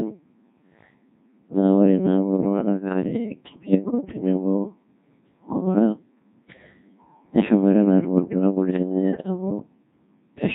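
Speech passed through a Codec 2 vocoder, whose heavy damage points to a rate near 1.6 kbit/s, so the voice is resynthesised from sine waves and sounds robotic and buzzy throughout.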